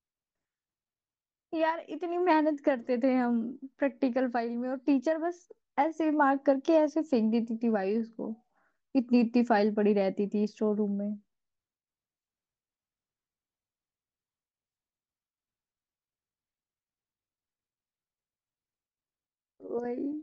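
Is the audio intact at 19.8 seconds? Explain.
Yes, the audio is intact at 19.8 seconds, with no fault present at that moment.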